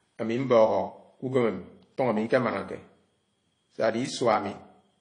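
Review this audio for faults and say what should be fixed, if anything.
Throughout, the speech stops at 9.8 kHz and carries two overlapping artefact textures, likely transcoding between lossy codecs (WMA then AAC-LC); single-codec compression leaves only one. Encode once, directly from the original source.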